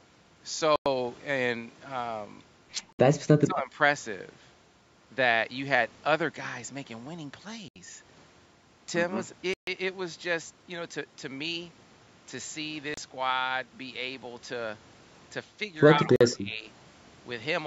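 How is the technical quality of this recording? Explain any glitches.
The recording has two recurring glitches: brief dropouts to silence and short stretches where the speech level is pulled down. The band stops at 8 kHz, consistent with call microphone processing.

Bluetooth stall: at 0.76, 2.93, 7.68, 9.54, 12.94 and 16.16 s, the sound cuts to silence for 101, 64, 74, 137, 32 and 45 ms, then resumes. This is likely the headphone buffer emptying while interference delayed packets.

Speech suppressed in double talk: from 3.40 to 3.78 s and from 16.01 to 16.65 s, the speech dips by about 15 dB and then about 25 dB. The echo canceller likely mistook it for loudspeaker echo.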